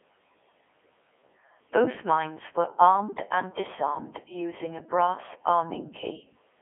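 Speech runs through the Codec 2 vocoder for its whole length, and the damage is heavy. The voice is rebuilt from sine waves driven only by pitch, voicing, energy and a spectral envelope, so it sounds robotic and buzzy, which fits the codec's top 3.2 kbit/s mode. A spectrogram shows stiff, evenly spaced harmonic stacks confined to a 300 Hz to 3.4 kHz phone band, with nothing above 3.6 kHz. The waveform looks synthetic, its original shape not kept.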